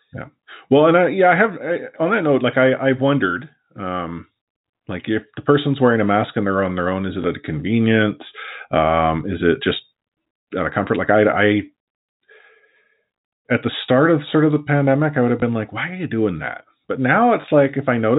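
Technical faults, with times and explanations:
7.22–7.24 s, 15.40–15.42 s and 17.42–17.44 s, packet loss with last packet repeated: each 20 ms gap, which fits one lost packet, is filled by replaying the previous packet, giving a small blip over the 4 kHz-limited G.711 telephone band.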